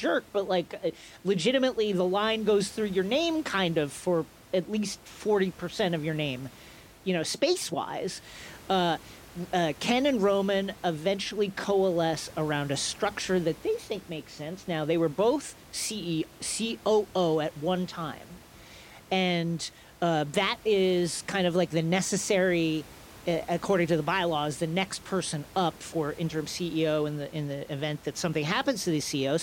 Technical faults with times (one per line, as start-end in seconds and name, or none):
none